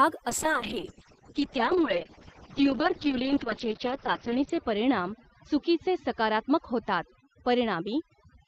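Overdone noise removal runs through the whole speech clip. Bands near the noise floor are gated away, leaving near-silent gaps with twinkling specks on the spectrogram. From 0.3 s to the end, a call bitrate drop coarsens the coding. The spectrogram's top edge falls from 20 kHz to 6 kHz, which fits a fall from about 32 to 6 kbps. The sound turns muffled and rough, worst for about 3.0 s.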